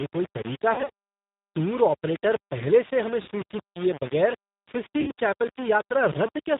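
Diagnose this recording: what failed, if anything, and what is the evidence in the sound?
Grainy, signal-following distortion runs through the whole recording. Quiet passages turn gritty and the softest parts sputter, with the error sitting only about 15 dB below the speech. The likely cause is low bit depth without dither at a sample-format conversion: samples rounded to a very coarse grid, which fits 4-bit resolution. Unlike steady hiss or codec noise, this grit rises and falls with the speech and vanishes in true silence.

The speech also has the band-limited, slightly synthetic roughness of the G.729 codec (the Annex A variant, 8 kbit/s), clearly audible throughout. Nothing reaches above 4 kHz, so sibilants are dull, and voiced sounds carry a rough, rebuilt quality. That comes from the decoder resynthesising speech from a filter, a pitch predictor and sparse pulses, not from transmitting the waveform. 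It differs from the quantisation grit above because it is smooth, band-limited and artificial rather than grainy.

In the network stage there are three dropouts handled as VoIP packet loss concealed by the speech codec. From 0.74 to 0.90 s, 100 ms of audio is missing in gaps scattered over 160 ms, and no single gap is longer than 40 ms. Further gaps of 60 ms fall at 3.22 to 3.30 s and 5.01 to 5.11 s. The decoder fills each hole by stretching the last sound into a fading buzzy tone or coloured noise, and the voice stays weak briefly afterward. This is unlike plain dropouts, which would go silent or click.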